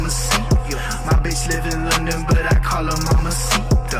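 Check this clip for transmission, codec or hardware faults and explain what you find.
Nothing in the clip points to a transmission, codec or hardware problem. The audio runs without any audible disturbance that could be traced to the signal chain.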